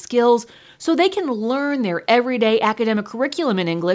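No faults are audible; the speech has simply passed through normal call microphone processing, with the lowest bass trimmed and nothing above 8 kHz.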